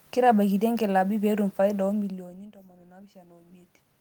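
After "inkilaabi peetum faida oo", around 2 s the talker moves back and the input falls by about 22 dB. From 1.94 to 3.76 s, automatic gain rising lifts the gain about 7 dB, swelling voice and room noise together. The waveform envelope widens gradually, and the spectrogram's noise floor brightens.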